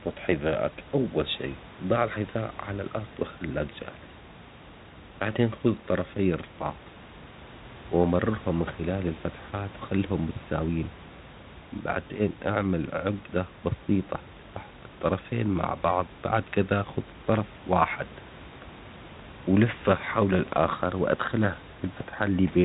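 There are no technical faults to describe in time order anywhere in this clip.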